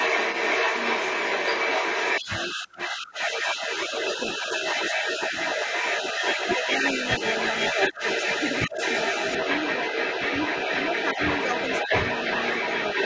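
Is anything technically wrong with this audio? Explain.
Yes, there are two faults. Throughout the whole clip, from 0.0 to 13.05 s, the other side's voice is leaking through. The far party's audio, played on the talker's loudspeaker, reaches the microphone, and what is likely incomplete echo cancellation leaves it in the signal. It sits loud, about 5 dB above the talker, as a second voice. On a spectrogram it shows as a second set of harmonic traces overlapping the talker's.

The speech is also suppressed in double talk, at 2.65 to 3.71 s (roughly 700 ms affected in all), at 4.38 to 4.48 s, at 5.01 to 5.08 s, at 7.91 to 8.0 s, and at 8.7 to 8.76 s. While both sides talk, the canceller likely cannot separate the talker from the echo and turns everything down. The talker's level dips by about 10 dB in the first, second and fourth places and about 5 dB in the others, so the voice briefly sinks or thins. 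The waveform shows short notches in the envelope. The spectrogram shows brief fading. The empty region above 8 kHz comes from the call's normal microphone processing.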